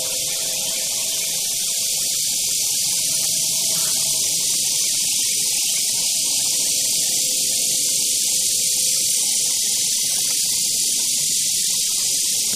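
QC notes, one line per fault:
No faults found.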